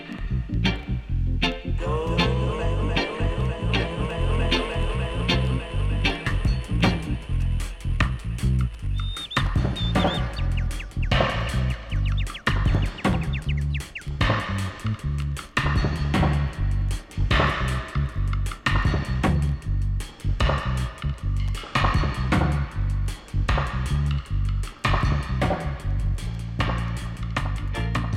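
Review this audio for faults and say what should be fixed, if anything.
No faults found; nothing needs fixing.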